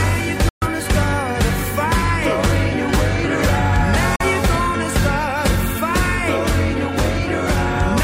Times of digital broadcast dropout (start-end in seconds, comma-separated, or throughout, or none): 0.49-0.67, 4.16-4.25